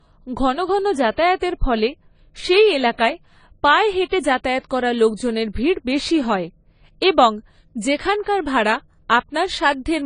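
From start to finish the speech carries AAC compression damage that is plainly audible: the sound is dull and smeared, with a watery, fizzy edge on sibilants and held vowels. The likely cause is an AAC-LC encode at a low bitrate, which fits about 24 kbps, where the encoder discards much of the spectrum to fit the budget. On a spectrogram, nothing appears above 10 kHz.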